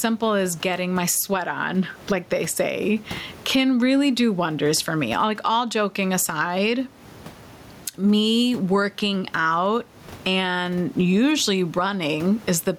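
A speech recording with gain pumping all the way through, the gain swinging around 15 dB, likely from gain set far too high with a fast limiter clamping it down. The room noise sits about 32 dB below the speech.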